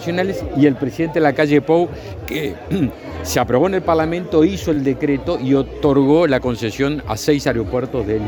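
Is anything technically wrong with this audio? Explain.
Yes. Around 4.74 to 4.77 s, fresh audio arrived late, so a repeated buffer occurred: the last 10 ms block replayed three extra times, heard as a brief buzzing stutter.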